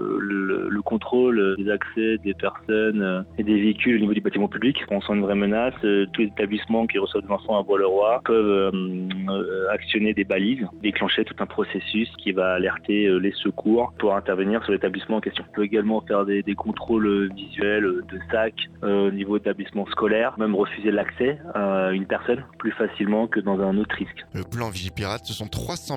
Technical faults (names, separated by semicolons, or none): resampler restarted on every block